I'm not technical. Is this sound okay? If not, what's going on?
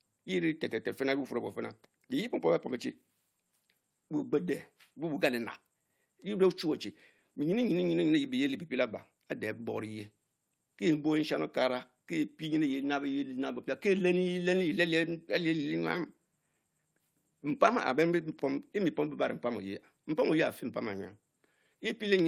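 Yes, this speech recording is fine. Nothing in it stands out as a technical problem, so there's nothing going wrong to explain.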